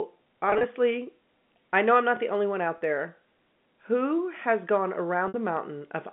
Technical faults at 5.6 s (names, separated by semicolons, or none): DC step